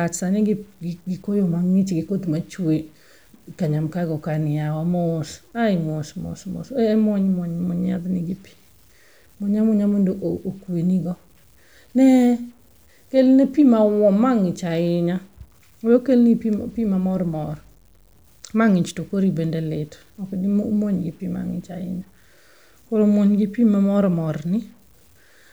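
Low bit depth without dither runs throughout: grainy distortion that follows the speech, about 40 dB below it, likely from truncation consistent with 9-bit resolution.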